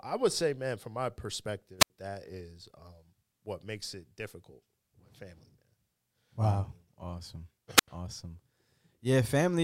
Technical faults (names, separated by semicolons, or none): wireless microphone squelch dropout